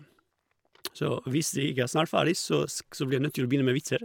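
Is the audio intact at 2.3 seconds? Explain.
Yes, the speech at 2.3 s is intact, with no dropout, click, distortion or other audible fault at that moment.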